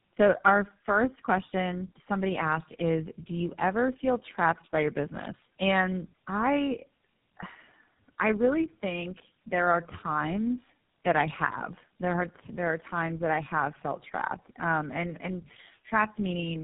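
From start to finish the speech carries tandem speech coding. The sound points to three low-rate speech codecs in a row, with G.711-style links between them, so it was decoded and re-encoded at each hand-off. Each coder models the previous one's errors as if they were speech, and the damage accumulates: a rough, buzzy texture, a muffled tone with nothing above 3.8 kHz, and a warbling, unsteady quality on sustained sounds.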